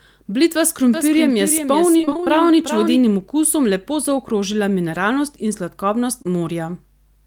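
From 0.94 to 3.01 s a doubled audio track appears: a second full-band copy of the speech trails by around 0.4 s at roughly 10 dB below the original, dry and without decay, starting and stopping abruptly. The likely cause is a slower second capture path or misaligned edit.

Inside that stretch, from 1.97 to 2.28 s, repeated packet loss gives a choppy, robotic texture. Holes of up to about 20 ms arrive in quick succession, and close to half of this span is filled by extending the preceding sound rather than real signal.

At 6.22 to 6.26 s a short concealed packet loss leaves a brief smear. About 20 ms of audio failed to arrive in time, and the receiver bridged it by continuing the last sound before blending back into the incoming stream.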